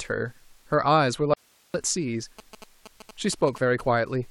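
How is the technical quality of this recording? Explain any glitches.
The recording has two clear technical faults: a short dropout and a stretch of mobile-phone interference.

From 1.34 to 1.74 s the speech cuts out abruptly, an audio dropout to a faint residue lasting about 405 ms. Nothing but hiss remains, roughly 35 dB below the speech. The likely cause is a momentary loss of the signal feed while the downstream chain stayed live. A waveform shows a sharp-edged flat gap, and a spectrogram shows a dim, even noise floor between hard vertical boundaries.

From 2.39 to 3.81 s, GSM signalling bursts intrude. A nearby 2G phone exchanging control traffic radiates short radio bursts that the audio circuitry rectifies into sound, here about 20 dB below the speech. They give a galloping dit-dit-dit of brief buzzes at 217 Hz. A spectrogram shows stacked harmonic lines from 217 Hz upward, chopped into regular blocks, and a waveform shows repeating rectangular bursts.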